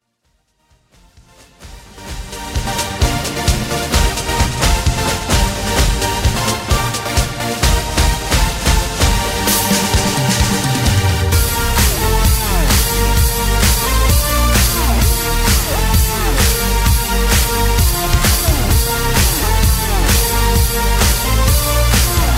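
Nothing here sounds wrong; the level eases up gently from the very beginning to full by about 2.9 s, and from there the audio just carries on without any fault to point out.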